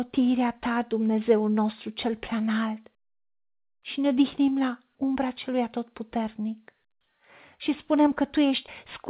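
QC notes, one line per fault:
No faults found in this speech clip. It has come through a phone-style call path, with nothing above 4 kHz, which fits the narrow band of G.711 A-law coding.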